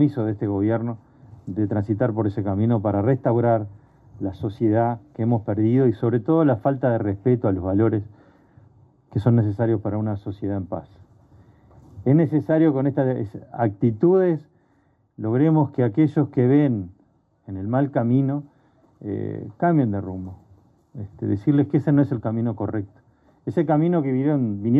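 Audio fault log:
No faults detected anywhere in the audio.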